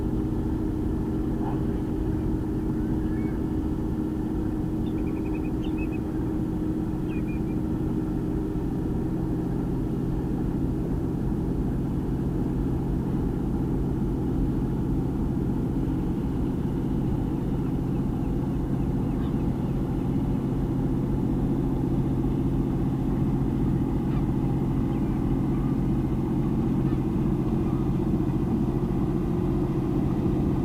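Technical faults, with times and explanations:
1.53 s and 10.85 s: compressed frames skipped. At each point the audio lurches forward, losing roughly 70 ms at 1.53 s and roughly 40 ms at 10.85 s, which fits about three and two missing 20 ms frames. The decoder never played those frames, so the sound jumps ahead. On a waveform the envelope shifts abruptly. On a spectrogram a vertical seam marks where the content jumps.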